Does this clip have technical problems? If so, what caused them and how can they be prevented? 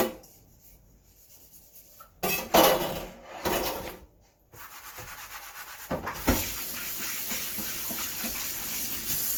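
Yes. Generation loss runs throughout: the sound is swirly, smeared and hollow, with blurred attacks, though content reaches about 20.1 kHz. The likely cause is roughly ten passes through Opus at around 64 kbit/s, each requantising on a shifted frame grid. Prevent it by editing from lossless masters and encoding only once.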